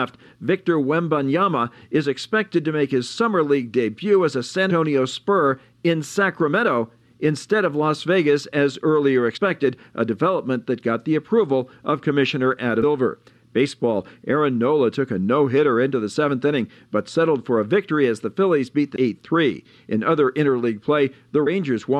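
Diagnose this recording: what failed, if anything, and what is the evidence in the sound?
Damaged data in a compressed stream, at the codec stage, is heard as brief blips at 4.69 s, 9.36–9.38 s, 12.82 s, 18.95 s and 21.46 s. Corrupted bytes make the decoder misread those frames and lose sync until it finds the next valid frame header.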